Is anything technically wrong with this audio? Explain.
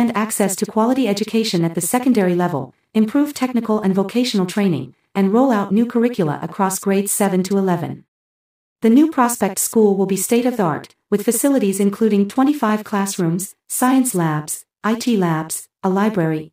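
No, the audio has no technical faults to report.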